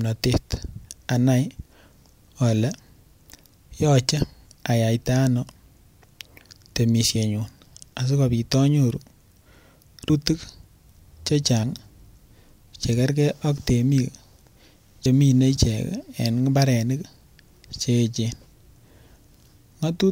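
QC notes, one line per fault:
7.15, 10.10, 11.63 and 15.06 s: compressed frames skipped. The speech suddenly jumps forward at each point, losing about 70 ms at 7.15, 11.63 and 15.06 s, which fits two dropped 32 ms frames, and about a fifth of a second at 10.10 s, which points to around seven. The decoder never played those chunks, so the sound resumes further on.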